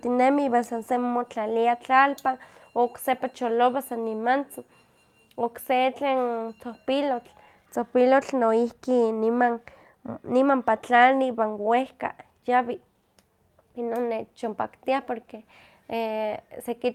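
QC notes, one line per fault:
No faults found on QC listening; the speech is intact, with nothing flagged for correction.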